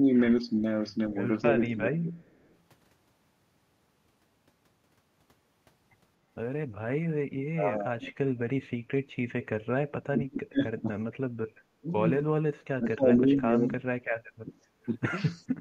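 Speech suppressed in double talk at 0.0 to 0.09 s and 0.62 to 2.16 s: the speech dips by about 10 dB over roughly 0.1 s, then about 20 dB over roughly half a second, likely because an echo canceller ducked it while both sides talked. An echo leak follows at 2.22 to 2.55 s, a faint copy about 40 dB down arriving 238 ms late, likely residual loudspeaker echo that escaped cancellation. The double-talk suppression returns at 7.51 to 8.12 s, 10.07 to 10.9 s and 11.83 to 14.52 s, each dropping the speech by about 30 dB. Background gated by the echo canceller at 15.33 to 15.48 s: the room sound falls by about 12 dB for a moment while the canceller clamps the microphone.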